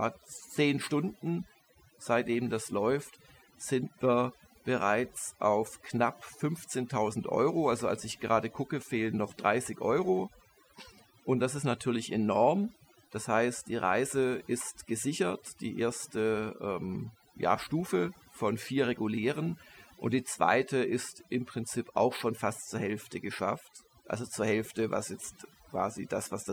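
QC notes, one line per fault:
throughout, overdone noise removal: aggressive reduction gates frequency bands near the noise floor, so the background drops and breaks up into twinkling specks and quiet parts of the speech are lost with it.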